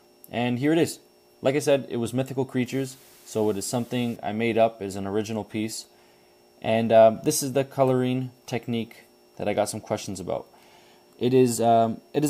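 From 2.66 to 4.16 s the audio picks up a flat, even hiss, sitting very roughly 30 dB under the signal, and it drops out just as abruptly. That's low bit depth with dither: the sound has been squeezed down to 8 bits, with dither added before rounding, so the quantisation error turns into steady white noise. That's why you hear a constant hiss with no gritty distortion on it for that second and a half.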